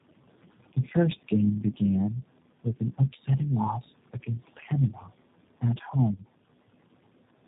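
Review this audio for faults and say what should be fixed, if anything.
Throughout the speech the background pumps: the residual noise drops away in the gaps and swells back under each phrase. These are noise suppressor artifacts. The suppressor estimates steady noise band by band and pulls those bands down frame by frame, here by about 18 dB, and the fast switching leaves the leftover noise unstable. The room noise underneath, about 19 dB below the speech, is what it is reacting to. Gentler attenuation with smoother gain changes over time would prevent this.

The speech is also muffled, rough and a little gargly all the way through, with nothing above 3.8 kHz. This is tandem speech coding. The sound points to three speech codecs in a row, which fits a chain of G.729A, then G.726, then G.729A again, with G.711 links between them. Each coder re-encodes the previous coder's errors as if they were part of the speech, so the distortion stacks up. 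Keeping the call in one codec end to end, or passing the coded stream through without re-encoding, would prevent this.

Two stretches of speech are briefly swallowed, from 4.93 to 5.1 s and from 5.61 to 5.94 s. The level dips by about 8 dB in the first and about 10 dB in the second, leaving those parts faint for a fraction of a second each time. This is speech cut by the noise suppressor. It mistook low-level speech energy for noise and turned it down along with the background. A voice-activity-aware suppressor with a higher speech-protection floor would prevent this.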